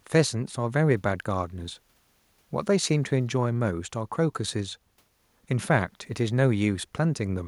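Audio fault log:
No faults are heard anywhere in this speech clip.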